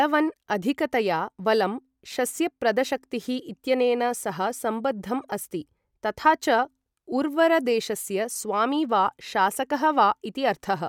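Listening to this speech recording, nothing technical stood out as a problem at any point.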